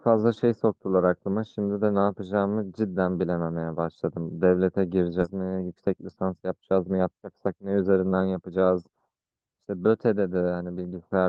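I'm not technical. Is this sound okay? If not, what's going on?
No. At about 5.21 to 5.23 seconds the speech suddenly jumps forward, with no silence, as if about a second of talking was cut out and the two ends were stitched together. This is a skip ahead. The call software's holding area for incoming audio, its jitter buffer, was running too far behind, so a chunk was thrown away to catch up, or it was lost on the way while newer audio was already waiting.

Right after that, from about 5.33 to 8.65 seconds, the speech sounds rushed, roughly 11 percent faster than normal, but the pitch stays the same. This is a jitter buffer speed-up. The buffer was still holding more audio than it wanted, so it repeatedly snipped out tiny slices, each one or a few vocal vibrations long, until close to half a second had been removed and the delay was back to normal.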